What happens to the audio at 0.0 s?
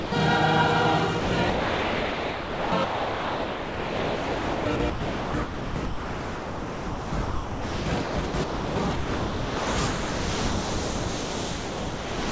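The clip opens with sound dropped by the voice detector, from 0.0 to 0.12 s. The detector at the sending end likely judged the first sound to be background and held off transmitting. For about 110 ms the real sound is missing. The receiving end fills the 119 ms gap with steady comfort noise, a soft synthetic hiss. The sound only cuts in once the detector triggers. The audio has nothing above 8 kHz throughout.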